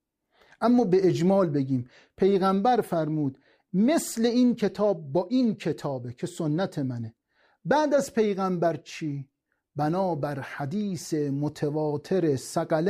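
Nothing in this speech recording stood out as a technical problem on listening.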